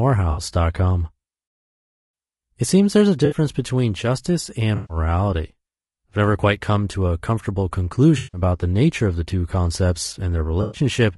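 Throughout, the speech is rough and grainy, with a synthetic-sounding top band. This is likely low-delay AAC compression at a low bitrate, roughly 32 kbps, whose short frames resolve pitch harmonics poorly.

AAC frame loss with concealment interrupts the audio at five points:
0.31 s
3.25 s, after "seems there's a" and before "between justice"
4.75 s, after "between justice"
8.17 s
10.61 s, after "of the two concepts"

Each is a smeared, noisy patch lasting 60 to 160 ms, where the decoder filled the missing stretch from the last good spectrum.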